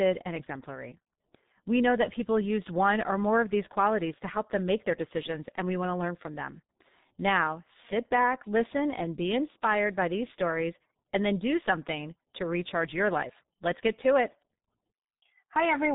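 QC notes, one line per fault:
throughout G.723.1 codec: the speech sounds heavily muffled and hoarse, with consonants smeared and nothing heard above 3.8 kHz. This early internet-telephony codec encodes the voice in 30 ms frames and refreshes its model of the vocal tract only slowly, so rapid articulation blurs together, and its rough excitation signal adds the raspy texture. The dull, thin result comes from the codec's higher-rate mode, around 6.3 kbit/s.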